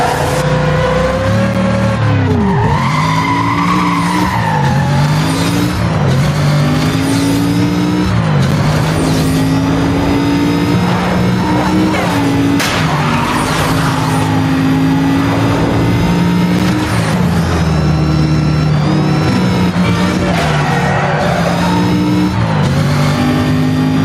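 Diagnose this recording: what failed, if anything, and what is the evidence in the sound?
Gain pumping runs through the whole recording. The gain swing is around 10 dB. Loud and soft passages sit unnaturally close in level, and the sound feels squashed. The fault lies in gain staging and dynamics processing. The likely cause is input gain set far too high, with a fast limiter or compressor clamping down on every peak.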